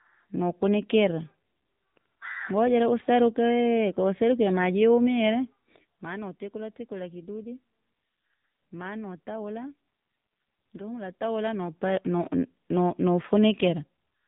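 From start to finish the speech sounds boxed-in and buzzy, with nothing above 4 kHz and a synthetic edge, the plainly audible damage of the AMR narrowband mobile codec. It rebuilds the voice from a vocal-tract model and sparse pulses, and the coarseness suggests a low rate around 7.4 kbps.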